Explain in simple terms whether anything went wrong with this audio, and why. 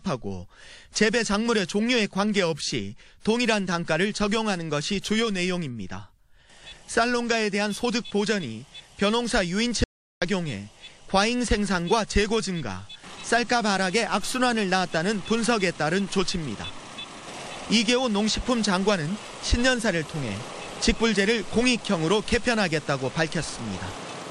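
Something did go wrong: an audio dropout to silence from 9.84 to 10.22 seconds. For about 0.38 seconds the sound cuts to total silence, with no background hiss left, then resumes mid-flow. That likely means the input signal was briefly lost while recording continued, so that moment is gone.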